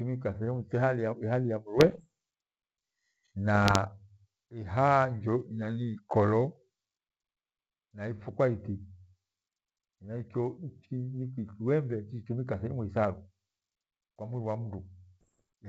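Bit errors on an ADPCM link hit four times: 1.78 to 2.05 s, 3.55 to 3.78 s, 8.16 to 8.35 s and 15.21 to 15.46 s. Each is a cluster of pops and rough, gritty bursts with brief level jumps. Flipped bits knock the decoder's step size and predictor off track, so each error rings for some milliseconds. The first burst is densest, near one percent of bits. The others run at roughly half that. The G.722 wideband coding itself sounds clean.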